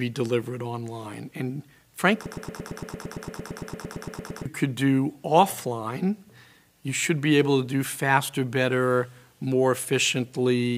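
From 2.26 to 4.46 s, a broken-record loop: a 113.6 ms fragment repeats 19 times, likely a stalled stream, showing identical back-to-back blocks on the waveform.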